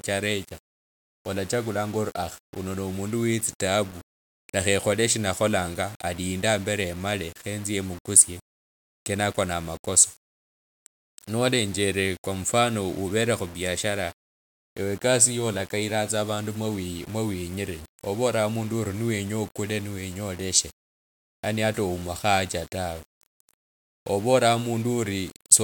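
From start to finish, the speech carries a grainy, gritty distortion that moves with the signal, breaking into a sputter as quiet tails and pauses fall toward silence. The error sits roughly 25 dB below the speech. The likely cause is low bit depth without dither: the audio was rounded to very few levels, which fits about 7 bits, so the error tracks the waveform instead of forming a steady hiss.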